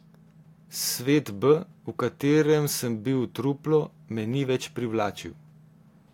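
Listening to the speech, nothing stood out as a technical fault at any point.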